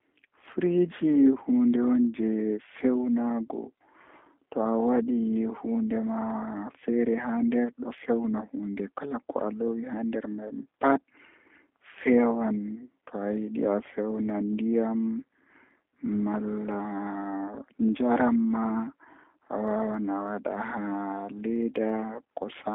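G.729 codec damage runs through the whole recording, from start to finish. The speech has been squeezed into a narrow telephone band of roughly 200 Hz to 3.5 kHz, with nothing at all above 3.6 kHz, which fits an 8 kbit/s G.729 stream. The codec rebuilds each 10 ms frame from a vocal tract model, a pitch predictor and a few pulses rather than the real waveform. That leaves the voice plainly rough and slightly synthetic, dull at the top, yet still intelligible.

Clock slip clicks run from 0.12 s to 22.70 s: a faint, steady ticking roughly every 70 ms, around three hundred ticks in all. At that pace they blur into a soft rattle under the louder, sustained stretches of speech and drop away in the pauses. The likely cause is two devices running on separate, unsynchronised clocks about 300 parts per million apart. Each time that drift adds up to a full sample, a single sample is dropped or repeated, leaving a tiny discontinuity in the waveform.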